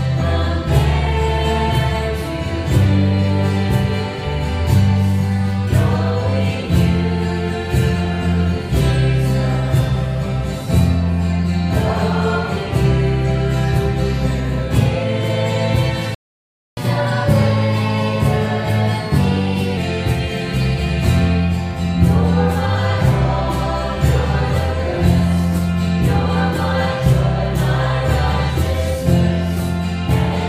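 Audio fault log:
16.15 to 16.77 s, playback stall: The output drops to silence in mid-flow for about 0.62 s, then the sound resumes. The likely cause is that the player ran short of buffered data or its audio thread was briefly blocked, so nothing reached the output until it recovered. The gap is long enough to be heard as a clear break, with the sound cut off abruptly rather than fading.
16.77 to 19.77 s, catch-up at higher speed: Once playback resumes, the player works through its backlog by resampling at 1.1 times normal speed for 3 s to recover part of the time lost in the stall. Because resampling changes speed and pitch together, the sound runs faster and sits about one and a half semitones sharp over that stretch. At 19.77 s it drops back to normal rate and pitch.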